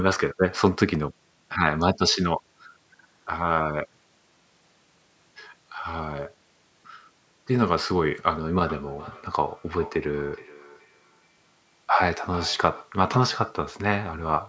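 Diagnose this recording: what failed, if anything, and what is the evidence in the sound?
From 8.6 to 13.0 s the speech comes back as a repeat roughly every 0.4 s, at most about 18 dB below the direct speech. This is feedback echo between two devices: a second device in the room replays the call into this microphone, which this device's echo canceller cannot remove.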